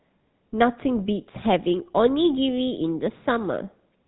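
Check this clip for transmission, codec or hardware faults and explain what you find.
One codec fault runs through the whole speech clip. GSM full-rate codec damage, throughout: the vocal-tract model driven by sparse regular pulses, consistent with 13 kbps, makes a buzzy, gravelly roughness; the spectrogram stops flat at 3.9 kHz.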